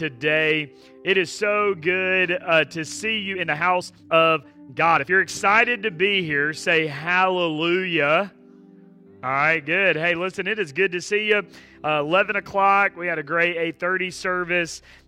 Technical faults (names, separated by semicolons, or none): time-stretched section